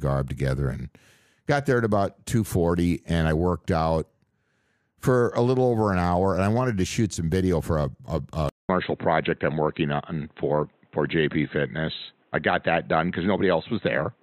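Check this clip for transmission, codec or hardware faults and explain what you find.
One fault is present. At 8.49 s, just after "video for a a", the input likely switched to a poorer device, such as another microphone or a headset's call profile, and it stays there to the end. That device passes nothing above 4 kHz, so from this point the speech turns dull and boxy. A 200 ms silence marks the switch. A new background noise floor comes in, well below the speech, while the overall level stays about the same.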